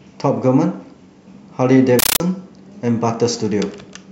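From 1.99 to 2.20 s the speech gives way to a very loud, harsh chattering static, a rapid rattle of noise bursts about 13.3 ms long repeating 31.25 times a second with silence between them. This is a compressed stream played as audio: a Dolby Digital (AC-3) bitstream, which fits a 640 kbps stream, reached the output undecoded and was treated as ordinary samples. Each coded frame comes out as noise followed by zero padding.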